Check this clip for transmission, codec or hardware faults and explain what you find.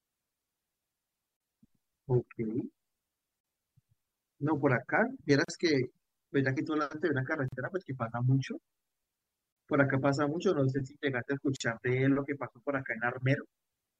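Six gaps at a join of encoded pieces interrupt the speech at 1.37, 3.40, 5.44, 7.48, 9.52 and 11.56 s, recurring every 2.0 s. Each lasts 40 ms, except the first at 36 ms. The segments were encoded separately and joined with each encoder's start-up delay and final-frame padding left in. Each gap is heard as a brief dropout, after which the speech resumes where it stopped. On the waveform it appears as a flat silent notch, and on the spectrogram as a narrow blank vertical stripe with slightly smeared edges.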